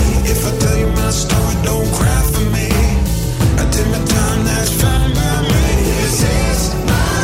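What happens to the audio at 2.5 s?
Nothing goes wrong at 2.5 s: the audio plays through that moment intact, with no dropout, click or other fault.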